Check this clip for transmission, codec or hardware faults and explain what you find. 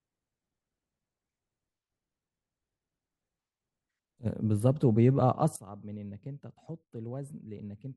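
One fault is present, a sudden gain jump. At 5.56 s the speech drops abruptly by about 18 dB and stays at that lower level to the end of the clip, with the background noise falling in step, so the whole signal, not just the talker, gets quieter at once. The likely cause is a digital gain change applied from one sample to the next without a ramp, such as a level setting or bit shift switching instantly.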